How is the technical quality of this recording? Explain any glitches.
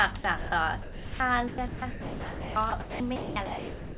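The recording has some clear glitches, and they all look like the call's voice activity detection cutting in too eagerly. Underneath, it's narrowband audio with nothing above 4 kHz, which fits a G.711-style telephone codec, and the room noise sits about 23 dB below the speech.

Sound chopped by the voice detector, from 0.18 to 0.52 s and again from 1.48 s to the end: the audio keeps breaking up. In the first stretch about 200 ms is swapped out, and in the long second stretch about 1.84 s, so the speech stutters in and out. That's most likely the sender's detector toggling on and off, reading quieter parts as silence and sending comfort noise parameters instead of audio.

Sound dropped by the voice detector, from 0.82 to 1.2 s: here the speech simply disappears for about 380 ms and is replaced by steady comfort noise. Then it comes back. This is likely the detector deciding a soft passage was just background and stopping transmission, so the receiver fills the gap with generated noise until the detector picks the speech up again.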